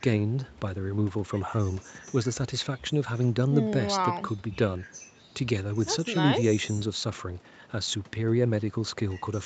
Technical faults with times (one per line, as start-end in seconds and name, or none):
none